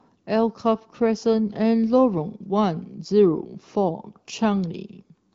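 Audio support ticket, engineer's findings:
No faults found: the speech carries the roughly 7 kHz bandwidth of the AMR wideband (HD Voice) codec in an upper mode, which fits about 15.85 kbit/s, with only a light coded texture.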